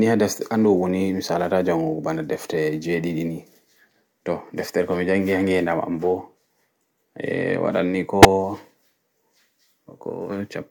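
At 8.22 to 8.25 s, just after "waɗan ni", a corrupt frame is decoded: flipped bits in a single compressed frame were played as valid data, misplacing energy across the spectrum for about 30 ms and producing a brief burst of wrong sound.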